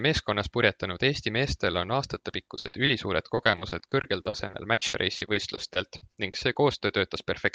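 Repeated packet loss (robotic sound) first hits from 2.55 to 2.89 s: four brief holes, none longer than 60 ms, with nearly half that stretch patched by stretching the preceding sound. It returns from 3.35 to 6.57 s as around thirty holes, about a fifth of the span concealed. Over the call path, which sounds like Opus with its top near 12 kHz, this gives a choppy stutter with pieces missing. A single dropout would leave one short patched gap instead of a recurring stutter.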